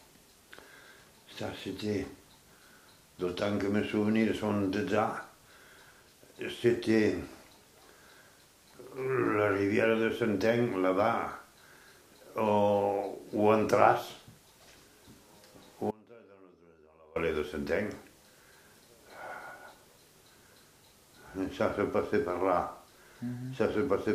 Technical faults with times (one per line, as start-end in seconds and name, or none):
15.91-17.16 audio dropout to a faint residue